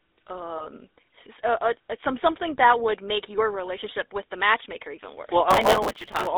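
The whole clip has gone through the GSM full-rate codec, the old 13 kbps mobile standard. The speech sits inside a 300 Hz to 3.7 kHz telephone band, and the pulse-driven vocal-tract model gives every syllable a clearly audible buzzy, gravelly grit.

From 0.58 to 0.66 s there are lost GSM frames. The decoder covers the gap by repeating the last good frame's settings, so you hear a brief rough, metallic ring. The short duration points to a single dropped 20 ms frame.

Right after "the matchmaker even worse", from 5.51 to 6.27 s, there's processor overload crackle. The processor keeps missing its deadlines on tiny buffers of a few milliseconds, around a hundred in a row, and stale audio with hard edges fills each slot. The result is a gritty, tearing crackle.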